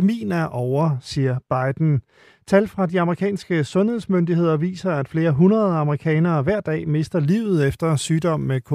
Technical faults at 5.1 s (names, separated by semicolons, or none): de-emphasis applied wrongly